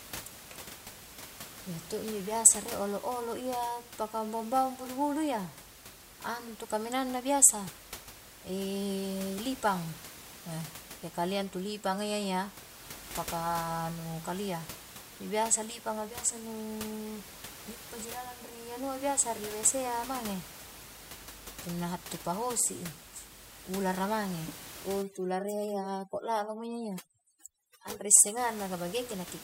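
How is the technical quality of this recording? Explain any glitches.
One glitch appears near the end, against room noise that sits about 15 dB below the speech. Overdone noise removal, 25.02 to 28.37 s: an over-aggressive noise reducer mutes bands near its noise estimate, leaving twinkling near-silence and taking quiet parts of the voice with it.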